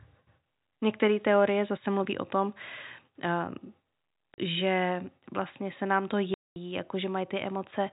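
At 4.34 s, just before "že vlastně se nám", the speech drops into dead silence for 40 ms, then again for 220 ms at 6.34 s after "vlastně se nám to". This is packet loss filled with silence: lost packets were replaced by nothing, and both gap lengths fit 20 ms packets. Unlike concealment or a fade, the holes are truly empty and start and stop with hard edges, cutting into narrowband telephone-coded audio.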